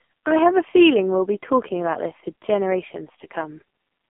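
Throughout, the speech shows AMR narrowband mobile codec damage. It is band-limited to 200 Hz–3.5 kHz, with heavy, buzzy, synthetic pulse-excited tone that fits the lowest 4.75 kbps mode.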